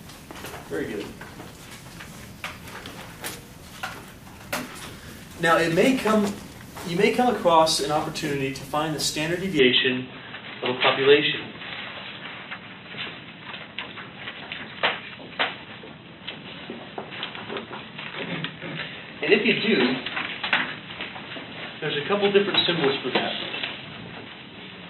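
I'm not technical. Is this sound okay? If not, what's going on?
No, not quite. From about 9.6 seconds to the end, the sound suddenly turns duller and boxier, as if the top end has been cut off; nothing above roughly 4 kHz gets through. The loudness shifts at that moment, a different background noise sits underneath, and there's no gap at the change. That pattern most likely means the input switched to a poorer device partway through, such as another microphone or a headset's call mode.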